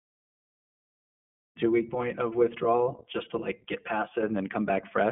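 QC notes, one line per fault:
throughout: iLBC codec. The speech is squeezed into a telephone band of roughly 150 Hz to 3.4 kHz, with nothing above 3.7 kHz, so it sounds thin and boxed in. The codec packs each 20 ms frame at 15.2 kbps, modelling the excitation of each frame on its own, and the damage is plainly audible: the voice takes on a slightly rough, synthetic edge that stays steady through the whole clip.
1.66 to 4.23 s: channel delay (comb filtering). Just after "the one week to", one channel starts running about 5 ms behind the other, and the two are summed to mono. Anything common to both then cancels at evenly spaced points, the first near 100 Hz and repeating up the band. That fixed notch pattern gives the speech a hollow, phasey colour, and it clears at 4.23 s.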